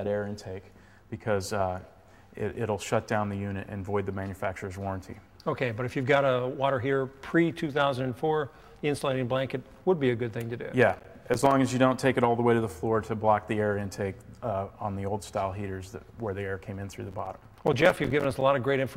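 Processor overload crackle breaks up the audio from 10.89 to 11.51 s and again from 17.08 to 18.41 s. Repeated missed deadlines leave tiny silent gaps, which fits buffers of roughly 5 ms. Unlike a single dropout, these are dense gritty bursts that stop once the load passes.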